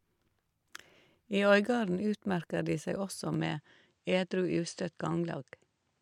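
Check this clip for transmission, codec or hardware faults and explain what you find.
One fault is present: the input switched to a poorer device. From 3.34 s to the end, the speech loses everything above 9.3 kHz. There is no gap at the change and no level jump. A faint new noise floor appears, roughly 50 dB down. The likely cause is the system moving to a narrower-band microphone.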